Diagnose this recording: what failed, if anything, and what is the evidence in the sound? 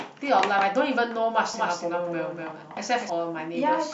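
A doubled audio track runs from 1.54 s to 3.10 s. The speech gains a second full-band copy trailing by about a fifth of a second. That copy sits roughly 5 dB below the original. It carries no decay and no room colour, so it is not an echo. It appears and vanishes abruptly at those times. The likely stage is capture routing: the same signal recorded again through a slower path, summed out of step.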